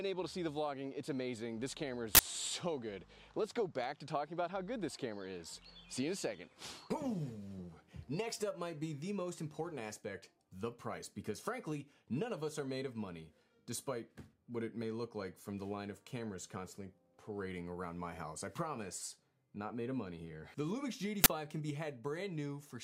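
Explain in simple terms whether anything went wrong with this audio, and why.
Two sharp bursts of harsh digital noise break in, one from 2.15 to 2.19 s and another from 21.24 to 21.26 s. That's an uninitialised buffer: the system sent a block of memory to playback before any real audio had been written into it, so whatever junk was left there got played as sound. The first block lasts 40 ms and the second 20 ms, which is why each one is just a brief loud crackle.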